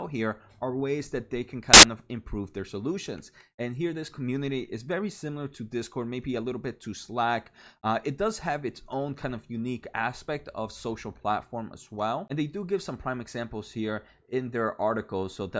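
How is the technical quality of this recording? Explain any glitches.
There's one clear glitch, and it's a loud one. At 1.74 s, right after "ways that they can" and before "of improve their solutions", the speech is cut by a burst of static that lasts about 0.1 s and ends at 1.83 s. It's file tags played as audio. A chunk of the file's embedded cover picture got decoded as if it were samples. Because image data is compressed, it looks essentially random, so it comes out as very loud white noise with abrupt, hard edges.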